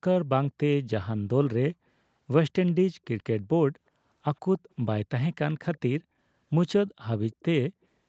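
At 3.19 to 3.23 s and 7.32 to 7.42 s, a very faint copy of the speech trails about 130 ms behind, likely echo leak from an incompletely cancelled far-end loudspeaker.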